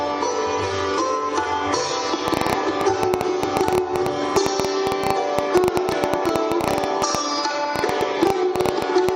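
From 2.28 s to 9.10 s a train of clicks runs over the audio, about nine per second at an irregular spacing, some seventy in all. Each click has much the same sharp shape and peaks roughly 20 dB above the surrounding sound, so the ticking stands out clearly, including in quieter gaps. The cause is likely interference from nearby equipment or a faulty connection or power supply injecting repeated pulses into the signal path.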